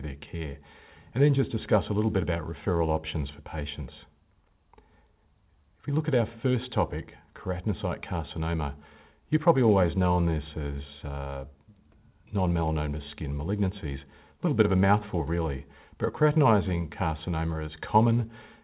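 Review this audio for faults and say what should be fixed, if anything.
No faults turn up in this review, so nothing needs to be fixed.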